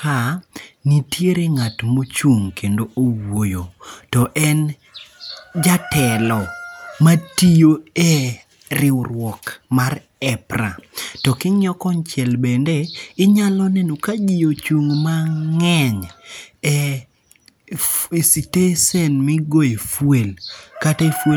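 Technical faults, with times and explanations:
Nothing technically wrong turns up anywhere in this bit of speech.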